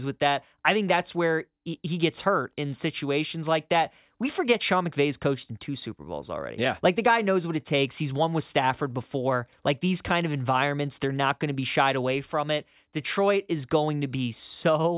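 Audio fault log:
No fault is heard in this speech clip.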